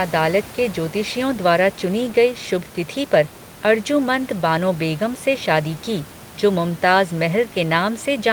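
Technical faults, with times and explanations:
No technical faults are present in the recording. Room noise sits about 18 dB below the speech, which is the acoustic background of where the microphone was placed.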